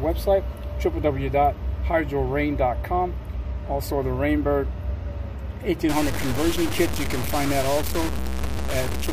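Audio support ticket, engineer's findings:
Low bit depth without dither, 5.89 s to end. Sound turns coarse and grainy; the error tracks the signal, and the quietest passages sputter or drop out between steps. Error level only roughly 10 dB under the signal, which fits about 4-bit resolution. Likely cause: word-length reduction by truncation, no dither applied, somewhere after 5.89 s in the chain.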